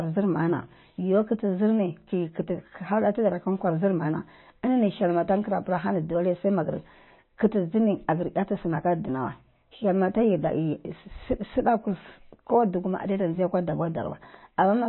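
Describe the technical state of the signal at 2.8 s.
At 2.8 s, as across the whole clip, the speech is band-limited with nothing above 4 kHz and sounds plainly watery, likely from low-bitrate MP3 compression. A spectrogram shows a flat ceiling and flickering holes.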